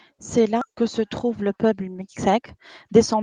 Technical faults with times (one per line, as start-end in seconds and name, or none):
0.61 skip ahead
0.72-3.15 jitter buffer speed-up